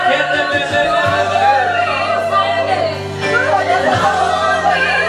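Nothing in this one stands out as a technical fault, so there's nothing to flag here.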